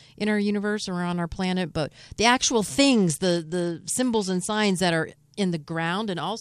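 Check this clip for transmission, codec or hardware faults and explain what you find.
A Bluetooth SBC bit pool drop runs from 2.91 to 4.74 s: the link's encoding budget falls, so the upper sub-bands starve and the rest are coarsely quantised, dulling the speech and adding gritty noise, consistent with a bit pool falling from about 31 to 12.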